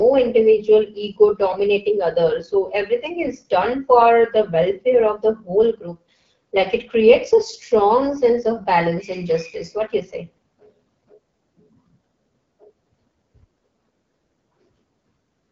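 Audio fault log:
Throughout, AMR wideband (HD Voice) codec: the speech sounds rough and raspy, with plainly audible coding damage and nothing above 7.5 kHz. The harshness fits one of the lowest AMR-WB modes, around 8.85 kbit/s, where too few pulses drive the vocal tract model.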